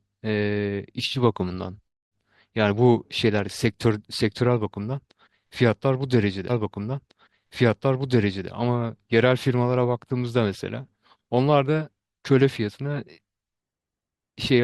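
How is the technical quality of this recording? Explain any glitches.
There is one glitch: a stream segment repeated. At 6.49 s the playback jumps back, with a small blip. About 2 seconds of speech then play again, ending at 8.49 s. The player queued the same segment twice.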